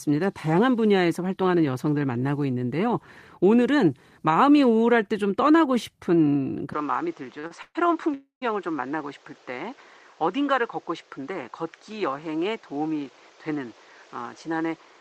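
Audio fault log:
6.73 s to the end, input switched to a poorer device: the speech suddenly goes duller and a little boxier, with nothing left above 8 kHz, a new background hiss sitting somewhere around 30 dB under the voice, and the level dropping by a few dB. There's no gap at the changeover; it just flips. That mix of narrower band, different tone and fresh noise floor is most likely the input jumping to another mic or a headset's call profile.
7.39 to 7.44 s and 7.47 to 7.51 s, short stall from a late packet (two of them): the sound at each point hangs on a touch too long, about 40 ms the first time and 30 ms the second, with a faint buzzy smear. A packet turned up late, the jitter buffer briefly ran dry, and the receiver stretched the last bit of audio until it arrived, then carried on from the same spot, so nothing's lost, just delayed.
7.62 to 7.76 s and 8.14 to 8.43 s, call audio freeze: longer hold-ups. 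The first runs about 126 ms with roughly 40 ms of it fading to silence. The second lasts about 275 ms, with around 130 ms gone quiet. You hear the last sound smeared into a decaying buzz before the dropout, then the speech resumes where it stopped. Most likely packets were held up long enough to empty the jitter buffer, so the gap is inserted rather than anything being cut.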